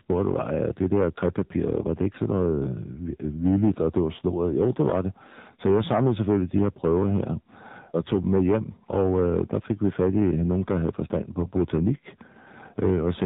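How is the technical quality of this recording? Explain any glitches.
The recording has clear technical faults: constant distortion and plainly audible codec coloring, plus one brief burst of corruption near the end.

Hard clipping runs throughout. The speech is driven about 7 dB past full scale, so a few percent of samples are cut flat. This adds crackly harshness on loud syllables, and the waveform shows squared-off peaks.

The AMR narrowband mobile codec also runs throughout. Its low-rate vocal-tract model, consistent with roughly 7.4 kbps, strips everything above 4 kHz and leaves a buzzy, synthetic tone. On a spectrogram, the energy stops sharply at 4 kHz.

AMR bit errors occur from 11.40 to 11.51 s. Flipped bits, at an error rate of roughly 5 percent across what fits about four frames, misplace the excitation pulses. The speech turns briefly gargly and scratchy, and a spectrogram shows smeared, disordered harmonics there.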